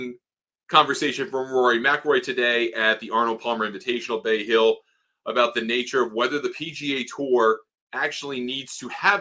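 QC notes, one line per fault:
No faults detected.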